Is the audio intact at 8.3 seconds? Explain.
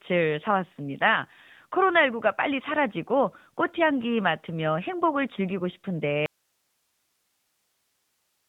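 No. From 6.26 s to the end of the clip there is an audio dropout to a faint residue: the speech cuts off abruptly and only hiss remains, roughly 50 dB below the normal level. The likely cause is the signal feed being lost while the downstream path stayed live, so the input noise keeps passing. The whole clip also carries the AMR narrowband mobile codec sound, with nothing above 3.8 kHz and a plainly audible buzzy, synthetic texture from the pulse-driven vocal-tract model. That degree of damage fits a mid-range mode around 10.2 kbps.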